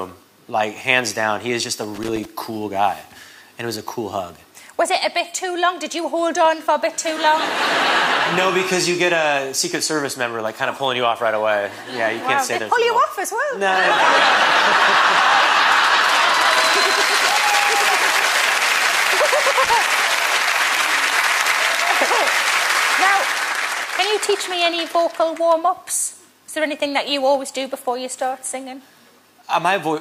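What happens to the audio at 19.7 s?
At 19.64 s a short burst of loose connector crackle breaks into the audio, lasting about a tenth of a second to 19.74 s. A worn or dirty contact is rapidly making and breaking, so the signal is chopped on and off while any DC on the line snaps in as pops. On the waveform this shows as jagged dropouts and sharp spikes; on a spectrogram, as a cluster of thin broadband vertical streaks.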